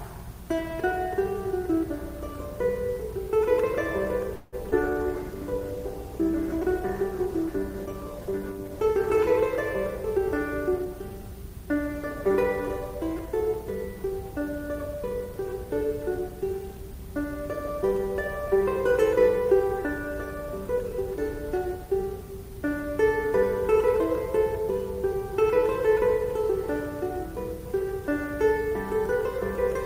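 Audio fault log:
4.35–4.55 s, call audio freeze: the sound stops moving forward and the last moment is stretched into a fading buzz for about 0.17 s. This is likely packets held up in transit, emptying the jitter buffer. When they arrive the audio resumes where it stopped, so nothing is lost but a gap is inserted.
4.71–4.74 s, short concealed packet loss: about 40 ms of audio never reached the decoder in time, and the receiver patched the hole by extending the preceding sound before blending back. The result is a brief smear or wobble, and whatever fell in that instant is gone.
4.84–9.44 s, call bitrate drop: the encoder's rate falls from 48 to 18 kbps after the bandwidth estimate collapsed, staying at the low rate for about 4.5 s. Coarser coding at this rate leaves the sound rough and watery, with the high frequencies trimmed away, until the rate recovers.
10.68–12.44 s, jitter buffer speed-up: with more audio queued than the buffer wants, the receiver repeatedly cuts out short pitch-period slices, removing roughly 150 ms in total. 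Playback runs at about 107 % speed while the pitch stays unchanged, so this stretch sounds slightly hurried.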